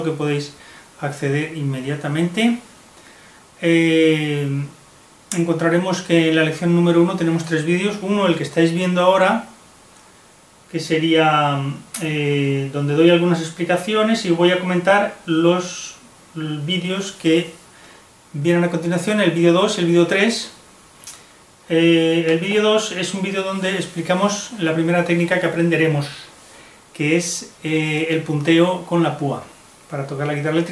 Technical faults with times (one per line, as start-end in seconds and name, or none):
none